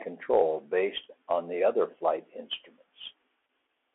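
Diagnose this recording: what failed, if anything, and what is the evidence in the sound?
The speech path ran through a Bluetooth CVSD headset codec for the whole clip. Its one-bit delta modulation, consistent with a 64 kbps stream, cuts everything above 3.8 kHz, and the adaptive step lags loud high sounds, leaving scratchy s sounds and a granular hiss under the speech.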